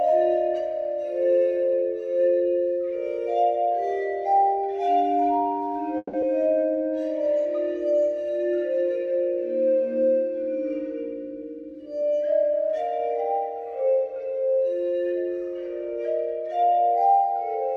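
A call audio freeze runs from 5.97 to 6.15 s: the last sound carries on as a fading buzz for about 160 ms, then about 20 ms of silence, likely from packets held up until the jitter buffer ran dry. Unlike a dropout, nothing is lost afterwards. A skip ahead follows at 6.21 to 6.24 s, where roughly a tenth of a second of audio is cut and the two sides are joined almost directly. A jitter buffer slow-down from 6.43 to 6.96 s repeats pitch periods, adding 95 ms and running the audio at 84% speed. The pitch stays the same, so the audio sounds stretched rather than frozen. A jitter buffer speed-up from 11.29 to 12.89 s removes roughly 150 ms in small pieces, so the audio runs at 109% speed and sounds hurried at an unchanged pitch, without any single audible jump.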